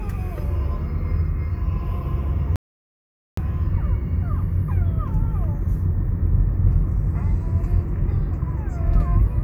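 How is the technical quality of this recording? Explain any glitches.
The recording has one clear glitch. From 2.56 to 3.37 s, an audio dropout to silence cuts the sound off dead for about 0.82 s, leaving no room tone. The likely cause is briefly lost input, with silence written in its place.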